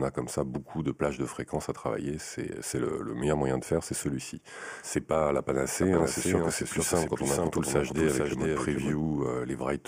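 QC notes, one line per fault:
5.82–8.96 s, doubled audio track: a second full-band copy of the sound runs about half a second behind the original, roughly 5 dB quieter, with no decay or room colour, and it cuts in and out abruptly. Likely cause: a slower path capturing the audio again, or an edit holding two offset copies.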